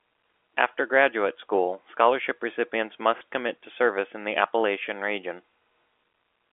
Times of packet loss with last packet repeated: 3.18-3.21

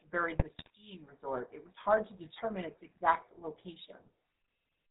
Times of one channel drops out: none

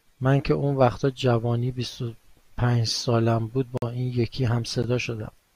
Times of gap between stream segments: 3.77-3.82, 4.82

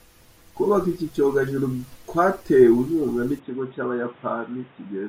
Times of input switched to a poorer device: 3.39-5.09

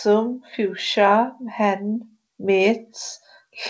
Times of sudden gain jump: none

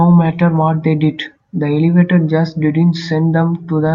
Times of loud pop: none

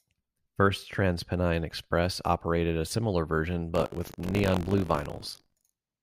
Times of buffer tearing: 3.73-6.03

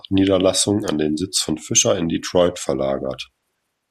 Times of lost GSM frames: none

